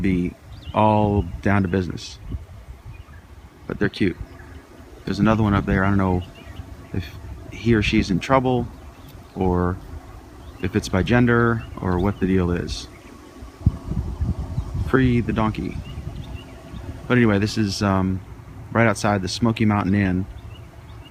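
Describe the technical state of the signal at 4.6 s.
Nothing goes wrong in the signal at 4.6 s: there is no dropout, distortion, glitch or other technical fault at that moment.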